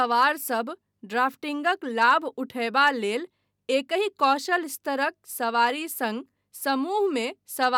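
No technical faults can be heard anywhere in the speech.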